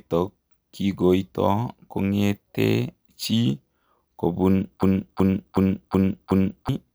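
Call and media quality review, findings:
System hang loop, 4.83 to 6.69 s: one 0.37 s chunk of speech repeats five times as a stutter at about 2.7 Hz. Likely the driver froze while the device kept replaying its ring buffer, which fits a 16384-sample buffer. About two seconds lost.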